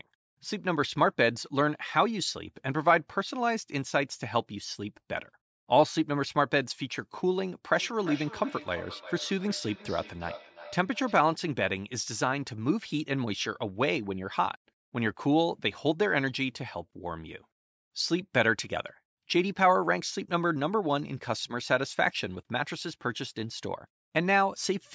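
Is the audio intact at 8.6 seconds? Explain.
No: from 7.75 to 11.29 s the speech returns in thin, ringing repeats roughly every 0.4 s, about 16 dB down, a feedback echo between two devices.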